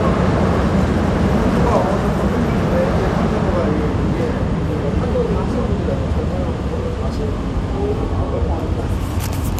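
Everyday sounds run the whole clip dull and gurgling, with a coarse, granular edge and upper frequencies flickering in and out. The likely cause is MP2 compression at a low bitrate, which fits roughly 80 kbps, starving upper sub-bands until they switch off.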